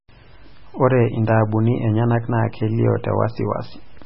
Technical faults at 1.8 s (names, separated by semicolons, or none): MP3 compression